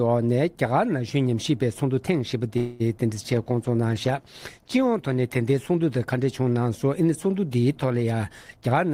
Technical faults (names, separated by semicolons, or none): call audio freeze; short concealed packet loss; call bitrate drop; jitter buffer speed-up